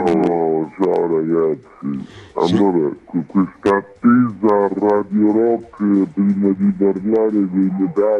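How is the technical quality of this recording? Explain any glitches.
The recording has one fault, present throughout: a wrong sample rate. Everything runs at about two thirds of its proper speed, and pitch drops by roughly 7 semitones in step with it. That ratio fits 48 kHz audio played back at 32 kHz with no conversion. Because tempo and pitch fall together by the same factor, it is set apart from a pitch-shift fault, which would alter pitch while leaving timing intact.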